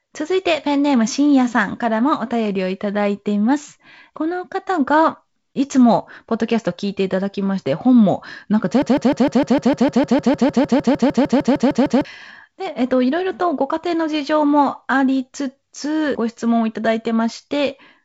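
From 8.82 to 12.05 s a 0.15 s fragment stutters back to back about 21 times, and the speech that should fill those seconds never arrives. This broken-record loop is likely a stalled player or stream resending its last buffered piece, heard over the band-limited G.722 audio.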